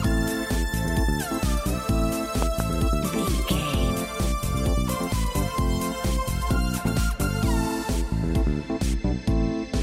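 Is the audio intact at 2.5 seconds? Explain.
No. A loud pop, two quick thumps from 2.42 to 2.62 s, sits well above the sound, likely a voltage pulse from a plug, switch or static discharge.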